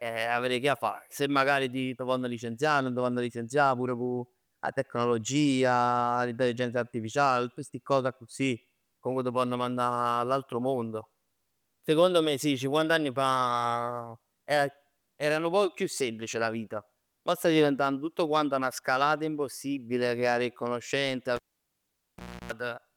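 Right after "ha avè 'e conoscenze", at 21.36 s, the speech cuts out with a pop: a classic cable pulled and plugged in. The line sits near silent for about 1.11 s while the connector is out, within which there's a 0.31 s burst of 60 Hz mains buzz as only the tip makes contact, grabbing hum instead of signal. Once the plug seats fully, another pop brings the sound back, wrapping up at 22.52 s.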